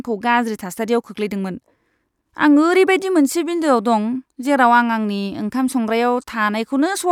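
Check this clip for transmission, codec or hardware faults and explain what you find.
Nothing in the speech points to a fault anywhere along the chain that carried or reproduced it. There is no event to report at any point in the recording.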